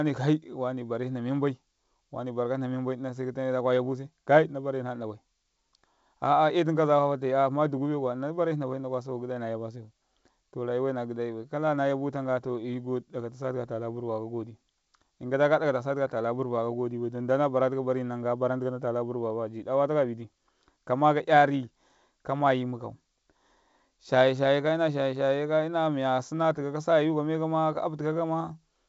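No technical faults occur in this speech, which is carried by G.722 wideband telephone coding at 64 kbit/s.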